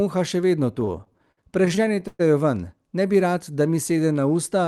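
From 0.75 to 2.21 s the speech drags and stutters, with eighteen stalls where the last sound is held and fades through the longest waits, up to 117 ms. This is repeated stalls (stutter): packets arrived late, the jitter buffer kept emptying, and concealment filled about a quarter of that stretch, 357 ms, with nothing lost.

From 3.08 to 4.22 s the speech slows to about 90% speed at unchanged pitch, with drawn-out sounds. This is a jitter buffer slow-down: to rebuild its reserve, the receiver repeated single pitch periods and bits of pauses, adding 118 ms. The whole clip carries call-codec coloration, with the band stopping near 12 kHz.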